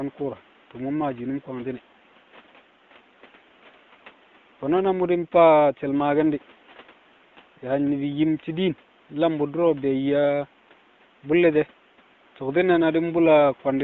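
Nothing faulty in this speech: room noise sits about 31 dB below the speech, and the wideband coding, consistent with AMR-WB at 12.65 kbit/s, leaves only light codec texture.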